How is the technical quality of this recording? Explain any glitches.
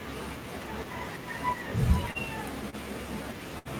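The speech has three network glitches, all in the back half.

Around 2.11 s and again at 2.70 s there's a short stall from a late packet: the jitter buffer ran dry, so the receiver held the sound for about 36 ms and then 28 ms before carrying on, with nothing lost.

At 3.59 to 3.68 s there's a burst of packet loss: the concealment drags the last sound out, fading it down, for about 64 ms, then it jumps ahead, skipping about 60 ms of speech.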